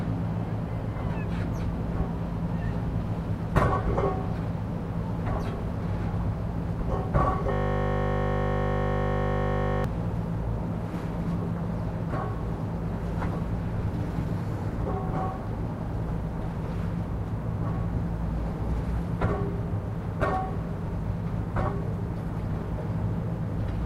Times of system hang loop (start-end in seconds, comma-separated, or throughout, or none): 7.53-9.84